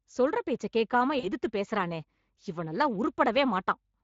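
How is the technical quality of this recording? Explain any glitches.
The recording carries audible coding damage throughout and one short dropout glitch.

Speex codec, throughout: The speech has been squeezed through Speex, a CELP codec that models the voice with a filter and a coded excitation signal. Damage from that coarse excitation is plainly audible as a noisy, hoarse roughness on the voice, which fits a bitrate of around 20 kbps, not a transparent setting.

VoIP packet loss concealed by the speech codec, 1.19 to 1.28 s: About 40 ms of audio went missing, which fits two lost 20 ms frames. The decoder filled the gap by extending its last pitch and filter while turning the gain down. This produces a brief buzzy or smeared stretch that fades, and the voice stays weakened and distorted for a moment after the signal returns because each rebuilt frame leans on the previous one.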